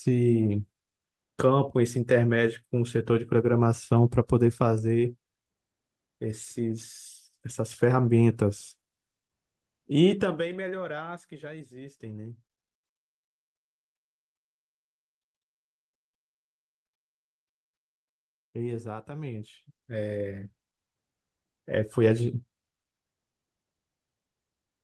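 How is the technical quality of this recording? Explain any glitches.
The technical quality of the recording is sound, with no glitches to explain.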